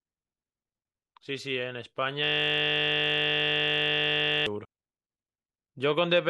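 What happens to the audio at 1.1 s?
Nothing goes wrong at 1.1 s; the speech carries on through that moment with no audible dropout, click, distortion or other fault.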